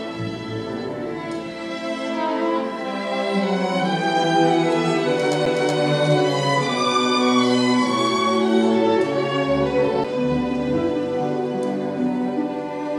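At 5.45 s and again at 10.04 s the laser loses its track and lands on a different turn of the disc's spiral, a CD skip. Each time the player mutes for only a few milliseconds while it recovers, then carries on reading from the new position. Both events are heard as a brief tick followed by an abrupt discontinuity, as the sound resumes from another point rather than continuing where it left off.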